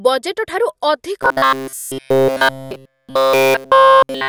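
Robotic sound from repeated short buffers begins at 1.23 s and continues to the end of the clip. It is likely that new audio stopped arriving in time, so a fragment of about 7.5 ms was looped throughout, imposing a rigid, metallic 133 Hz buzz that only loosely tracks the speech.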